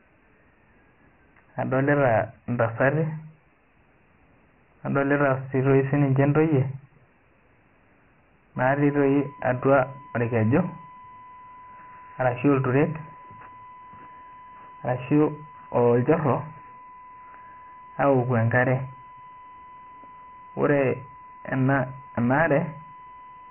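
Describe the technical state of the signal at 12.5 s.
At 12.5 s the speech carries Dialogic VOX ADPCM coding, present for the whole clip. Nothing sounds above 3 kHz, which fits 4-bit samples taken 6,000 times a second, and the heavy quantisation leaves a gritty hiss trailing the speech. A spectrogram shows a hard ceiling at 3 kHz with speckled noise beneath.

A USB whine also runs here, from 8.56 s to the end. Current drawn in 1 ms bus frames leaks through power or ground as a steady 1 kHz tone, roughly 20 dB below the speech. On a spectrogram it is a thin unbroken horizontal line at 1 kHz.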